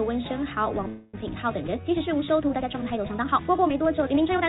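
A call audio freeze runs from 0.88 to 1.19 s. The sound stalls and the last bit is drawn out as a fading buzz or hiss for about a quarter second. It then picks up where it stopped, so nothing is lost. Delayed packets likely emptied the jitter buffer. From 1.45 s to the end there is a time-stretched section. The pace jumps to about 1.58 times faster with the pitch unchanged, so the audio sounds rushed. Software likely squeezed it by dropping short pieces. Throughout, nothing reaches above 4 kHz, which fits a G.711 call path.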